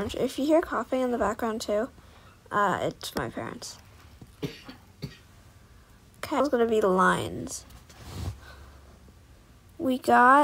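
No technical faults can be heard anywhere here.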